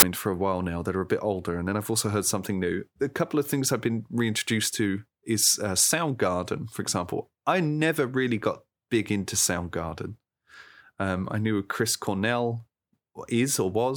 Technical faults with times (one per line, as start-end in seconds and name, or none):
0.00-0.02 file tags played as audio